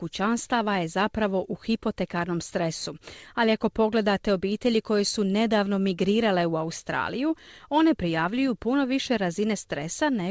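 No technical faults are audible.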